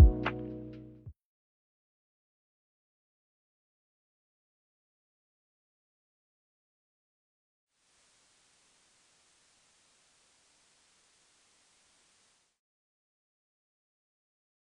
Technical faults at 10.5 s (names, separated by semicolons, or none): digital radio blending to analogue